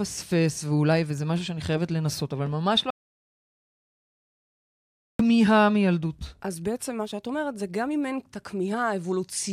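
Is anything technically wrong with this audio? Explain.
Yes, there's an audio dropout to silence from about 2.90 s to 5.19 s. The speech cuts off mid-flow and goes to dead silence, with no room tone, for roughly 2.3 s before resuming. Most likely the input was lost briefly and the recorder kept writing silence.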